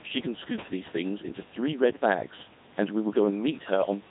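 Codec 2 vocoder damage runs throughout the speech, consistent with a rate near 2.4 kbit/s. Only pitch, voicing, energy and spectral envelope survive; resynthesis from sine waves makes it heavily robotic and buzzy, and the room noise about 21 dB below is mangled.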